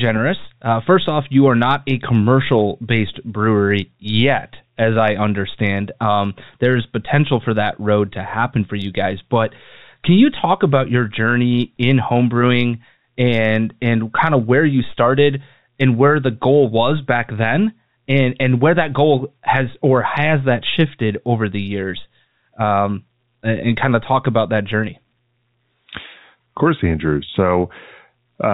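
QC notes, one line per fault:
Nothing to flag here: the speech comes across as ordinary telephone-band audio with nothing above 4 kHz and only the faint level-following hiss that G.711 telephone coding normally carries.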